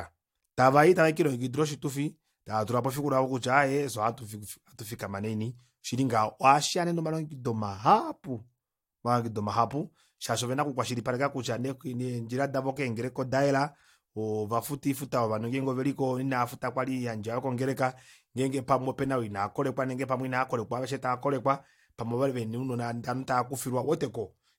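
No technical faults are audible anywhere in the speech recording.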